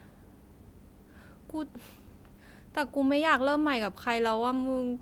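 Speech recording, no technical faults detected anywhere in the clip.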